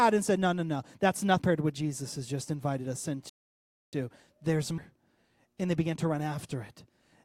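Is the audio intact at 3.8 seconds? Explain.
No. A rebuffering stall runs from 3.29 to 3.93 s, so 3.8 s falls inside a gap of silence. The player ran dry of downloaded audio and waited for more, then the speech resumes exactly where it stopped: nothing lost, but 0.64 s added.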